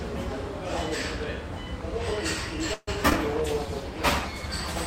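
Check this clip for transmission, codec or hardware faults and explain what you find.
Four kinds of transmission fault appear, all in the second half of the clip.

Call audio freeze, 2.73 to 2.89 s: packets likely stalled in transit and the jitter buffer drained, so the receiver stretched the last sound into a fading buzz for 140 ms, about 50 ms of it silent. Once the packets arrived, playback resumed where it had stopped. Nothing is lost, but a 140 ms gap is inserted and everything after it plays later.

Short concealed packet loss, 3.09 to 3.13 s and again at 3.13 to 3.15 s: a few hundredths of a second failed to reach the decoder in time. In the first event, 20 ms was missing and about 18 ms of synthesized continuation covered it before blending back, producing a brief smear. In the second, 40 ms went missing with only 2 ms filled, so the audio jumps ahead as the buffer sheds roughly 40 ms of delay.

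Jitter buffer slow-down, 3.42 to 3.66 s: with its reserve running low or its target delay just raised, the buffer built up a reserve by repeating single pitch periods in a row, adding 47 ms. For that quarter second the sound plays at 84% speed at unchanged pitch, so it is drawn out.

Call bitrate drop, 3.44 s to the end: the bandwidth estimate fell and the encoder went from 64 to 20 kbps, holding the low rate for the last 1.43 s. Coarser coding at that rate makes the sound rough and watery, and cutting the upper frequencies leaves it muffled.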